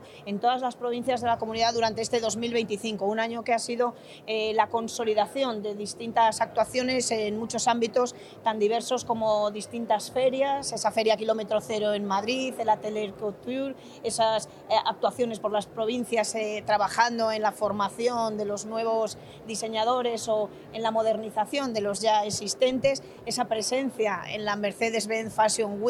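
No technical faults can be heard anywhere in this audio.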